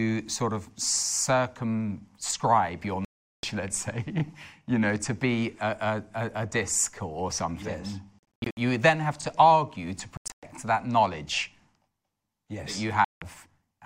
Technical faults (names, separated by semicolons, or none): Bluetooth dropout; overlapping chunks